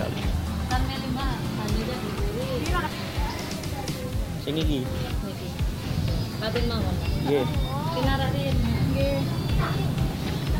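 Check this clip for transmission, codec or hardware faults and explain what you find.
One fault runs through the whole clip: low bit depth without dither. From start to finish, quiet passages turn gritty and the faintest moments sputter or drop to silence, a grainy distortion that shifts with the sound. The likely cause is rounding to very few levels, consistent with roughly 6 bits, leaving error around 25 dB below the signal. Because it tracks the signal, a waveform shows coarse staircase steps and a spectrogram shows broadband grit rising and falling with each sound.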